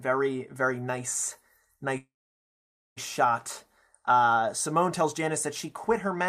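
From 1.97 to 2.99 s the speech stalls in a call audio freeze: the last sound is briefly extended as a fading buzz or hiss, then about 0.88 s of silence follows. This is likely a jitter buffer underrun from delayed packets, so the speech resumes where it stopped, nothing lost but everything after arriving about 1 s late.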